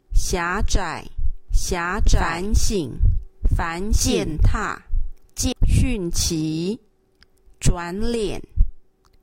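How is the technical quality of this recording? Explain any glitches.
The recording has one clear fault, a doubled audio track. From 1.48 s to 5.52 s, a second copy of the sound plays alongside the first. It trails by roughly one and a half seconds and is about as loud as the original. The copy is full-band and dry, with no decay or room colour. It cuts in and drops out abruptly. The likely cause is the same signal being captured twice, once through a slower path.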